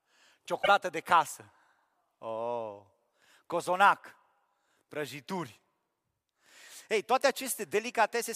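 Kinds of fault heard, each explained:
broken MP3 bit reservoir: a likely stream cut where later MP3 frames still point back into earlier frames for their borrowed data and read the wrong bytes, so the speech jumps ahead with a brief glitch from 0.62 to 0.68 s, just before "de casă", spanning about three 26.1 ms frames.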